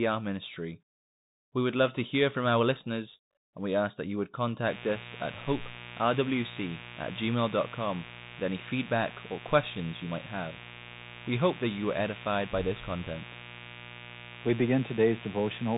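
From the very start the speech carries the sound of a Bluetooth CVSD headset codec. Nothing gets through above about 3.8 kHz, and the s sounds come out scratchy over a grainy hiss. That's the one-bit up-or-down coder straining, which fits a 64 kbps link.

At 4.66 s a mains buzz comes in and stays to the end. It's a steady, raspy 60 Hz drone with harmonics climbing well up the spectrum, from switching spikes getting into the line, sitting roughly 15 dB under the speech.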